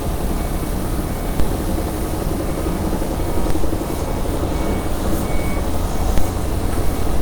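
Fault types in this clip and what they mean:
DC step: the waveform's zero line suddenly jumps to a new resting level, the sort of thing you get when a converter recalibrates or an input carrying an offset gets switched in. Here it shifts at 1.40 s and the offset is gone by 3.50 s, then shifts again at 6.18 s and stays offset to the end. Each jump comes across as a low thump or click while the sounds carry on unchanged over it.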